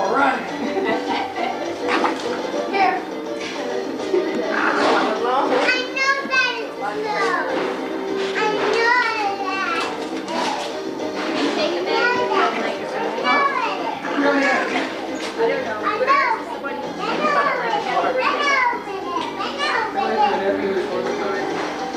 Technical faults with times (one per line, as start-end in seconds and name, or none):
none